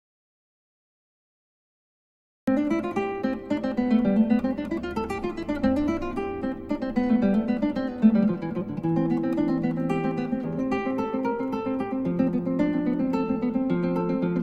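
From the very start until about 2.48 s there's an audio dropout to silence: dead silence with no room tone at all, then the sound cuts straight in mid-flow. The input was likely lost, through a disconnected device or a mute, while the recorder kept writing.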